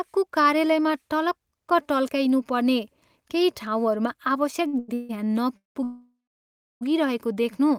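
A speech recording with network delay trouble packed into its second half. Two short stalls from a late packet come first, at 4.67 to 4.75 s and 4.79 to 4.90 s. In each, the sound just before is held too long, by 55 ms and then 92 ms, with a slight buzz or dip. The jitter buffer ran dry while a packet was overdue, so the last sound was stretched until it arrived. Nothing is lost; the speech resumes where it paused. Three call audio freezes follow, at 4.94 to 5.11 s, 5.57 to 5.77 s, and 5.83 to 6.83 s. The first is a 149 ms continuation with no silence. The second fills 184 ms, about 150 ms of it silent. The third is the longest, nearly a second, with around 670 ms of silence after the held sound fades. Packets were likely held up in transit each time. The speech then carries on from the same point, with no words skipped.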